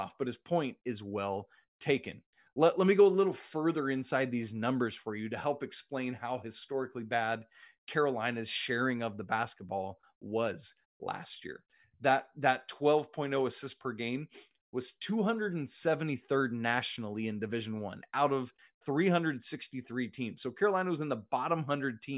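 Nothing stood out as a technical problem on listening to this speech recording.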